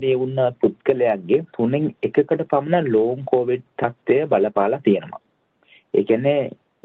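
No faults: the audio carries the expected call-path band limit, with nothing above 8 kHz, consistent with a wideband Opus call, and nothing beyond that.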